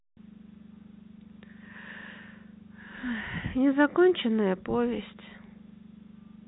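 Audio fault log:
No faults heard.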